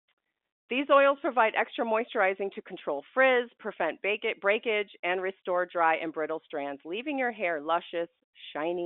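No technical faults are audible.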